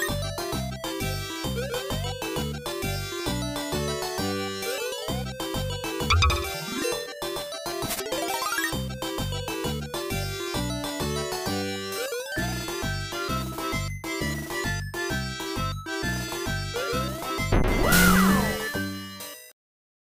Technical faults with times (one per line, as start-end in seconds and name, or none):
none